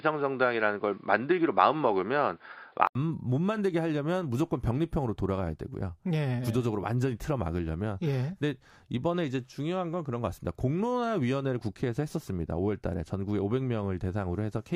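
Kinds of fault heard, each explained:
Input switched to a poorer device: speech until 2.95 s likely comes through a narrower device, with the spectrogram empty above 5.1 kHz, then an 80 ms gap and a waveform level step of a few decibels.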